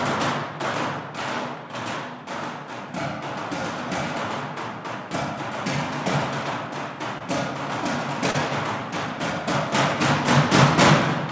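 Two short stalls from a late packet sit at 7.18 to 7.23 s and 8.31 to 8.36 s, in audio carried over a call path with nothing above 8 kHz. Each time the jitter buffer ran empty, so the last sound was stretched, for 27 ms and then 33 ms, before playback resumed where it left off. Unlike a dropout, nothing is missing; the sound is simply held too long.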